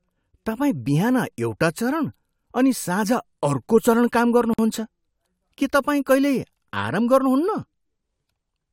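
A gap at a join of encoded pieces opens at 4.54 s and runs to 4.59 s, a silence of about 50 ms opening in the continuous speech. The edges are softened by the codec, so the fully silent part is shorter, and the speech resumes exactly where it broke off. Each separately encoded piece kept its leading encoder delay and its padded final frame, and the two were butted together untrimmed. With a repeat interval of 10 s, only this one join falls inside the clip.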